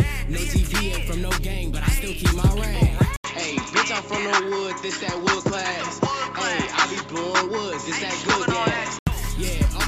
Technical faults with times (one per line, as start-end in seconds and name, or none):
3.16-9.07 input switched to a poorer device